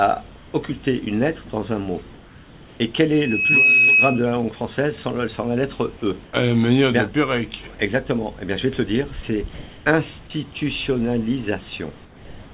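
Between 0.36 and 0.54 s, and again from 2.14 to 2.8 s, the background goes flat and steady, losing its texture and dropping by about 2 dB. It then returns with its detail when the sound resumes. This is likely comfort noise in place of the background: the sender's voice detection stopped transmission during quiet stretches, and the receiver filled each gap with synthetic, roughly matched noise.

From 3.12 to 4.26 s, a single piercing tone at 2.6 kHz swells over about half a second and settles well above the rest of the audio. This is a loudspeaker feedback squeal. A microphone is picking up the loudspeaker it feeds, and at 2.6 kHz the loop gain exceeded one, so that frequency kept reinforcing itself until the amplifier limited it or the loop was broken.

The same featureless fill returns briefly at 6.25 to 6.33 s, about 3 dB down. It comes back from 9.54 to 9.86 s, this time about 2 dB louder than the real background it replaces. 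Throughout the clip, nothing is heard above 4 kHz, which fits the G.711 mu-law call path.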